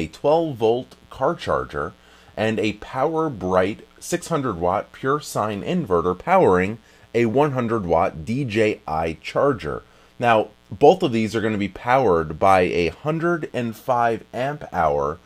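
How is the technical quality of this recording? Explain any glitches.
A mains buzz runs through the whole recording, a steady raspy hum sitting well below the sound, roughly 35 dB down. It comes from switching spikes in the 60 Hz mains, with harmonics climbing into the kilohertz range, so it sounds gritty rather than like a pure low hum.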